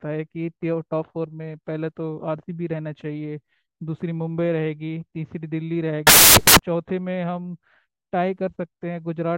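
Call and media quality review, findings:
Samples built from the wrong bytes, 6.07 to 6.59 s: speech swamped by loud, harsh broadband noise for about half a second. Sample reader is misassembling bytes (offset, swapped order or wrong alignment), so the noisy low bits land as the big part of each value.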